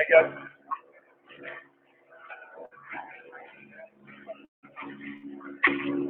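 A speech-tuned noise suppressor has been left running on this audio, and it keeps mistaking sustained and decaying material for noise. The level pumps over a range of around 15 dB as attacks get through and held parts sink. You can hear it where the noise suppressor cuts the sound. From 0.52 to 1.34 s and again from 1.64 to 2.13 s, steady passages drop by about 12 dB. A shorter dip of about 11 dB follows between 3.88 and 4.08 s. There are also two bursts of packet loss, at 2.65 to 2.74 s and at 5.17 to 5.26 s. Each time the receiver stretches the last bit of sound for roughly 55 to 65 ms while fading it down, then skips ahead, so about 60 ms of audio is simply gone. At 4.45 s there's a bigger hole. The sound smears on and fades, drops to near silence, and then picks up again at 4.66 s with about 180 ms missing. That's most likely a long network dropout rather than a short burst.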